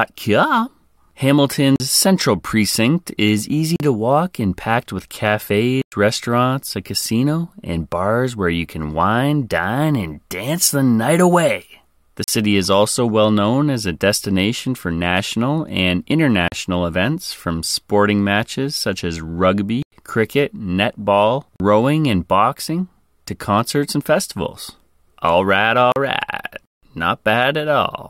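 Blocks of digital silence fall at 1.76, 3.76, 5.82, 12.24, 16.48, 19.83, 21.56 and 25.92 s, where stretches of the speech are replaced by zeros and the signal drops out and returns with no fade. Most gaps last 40 ms, including the one just before "central precinct is", the one between "central precinct is" and "to walk and packed", and the one before "is also well known". The longer gaps, about 105 ms at 5.82 s and about 95 ms at 19.83 s, sound as short holes.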